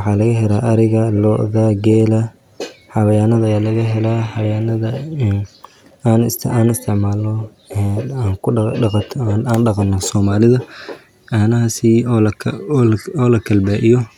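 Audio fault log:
Nothing to log here, since the speech comes across without any faults that a listener would pick up on.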